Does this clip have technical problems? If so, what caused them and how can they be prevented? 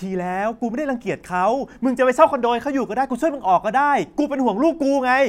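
No, nothing stood out as a technical problem on listening to this speech recording.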